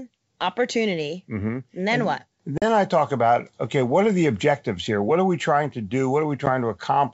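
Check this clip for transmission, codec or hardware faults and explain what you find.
Two dropouts interrupt this speech, which is carried over G.722 wideband coding at 64 kbit/s.

Packet loss on an ADPCM call, at 2.58–2.63 s and 6.46–6.49 s. About 40 ms and then 10 ms become hard-edged silence, likely from several packets and then one going missing. The decoder's predictor and step size lose step with the sender's, so the speech returns slightly distorted before settling.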